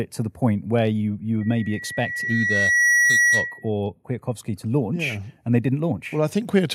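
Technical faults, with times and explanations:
1.41 to 3.70 s, loudspeaker feedback squeal: just after "point where you you", a steady tone near 1.9 kHz rises out of the speech, swelling over roughly a second and a half until it sits about 5 dB above the talker. The microphone is hearing its own loudspeaker, and at that one frequency the round-trip gain exceeds unity, so each pass reinforces the last and the pitch holds fixed while its level climbs.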